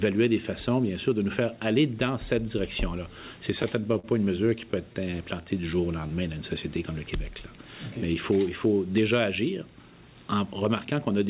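Repeated stalls (stutter) break up the audio twice: from 3.62 to 4.06 s there are four gaps, together about 77 ms and the longest 45 ms, and from 4.50 to 5.15 s there are six shorter ones, together 70 ms and none longer than 16 ms. Packets reached the receiver late, its jitter buffer ran dry, and it stretched the last sound to fill each wait, so nothing is lost but the sound catches and drags. On a spectrogram these show as short smeared stretches where the last spectrum is held flat.

A jitter buffer slow-down follows from 5.41 to 6.09 s. The audio plays at 88% speed with the pitch unchanged, because the receiver repeated single pitch periods to add about 94 ms and rebuild its reserve. In the waveform the periodic cycles look duplicated, and on a spectrogram the same stretch of harmonics runs longer without shifting in frequency.

From 8.07 to 8.73 s a jitter buffer speed-up runs the audio at 108% speed, again at the same pitch. 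The receiver cut short pieces of pitch periods, around 70 ms in all, to shed extra delay, so the sound feels hurried and the spectrogram looks slightly compressed in time.

Throughout, the call path leaves nothing above 4 kHz, which fits 64 kbps G.711 mu-law telephone coding.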